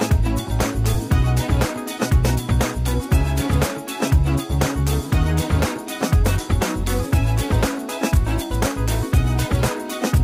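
At 0.94 s, lost LE Audio frames, which fits a single 7.5 ms frame, leave a brief noisy smear where the LC3 decoder repeats the previous spectrum with scrambled signs. It shows as a short, blurred vertical patch.

From 6.74 s to the end, sample clock jitter of roughly 5 µs adds a hiss about 30 dB below the signal. It shows as broadband haze that thickens on loud, bright passages.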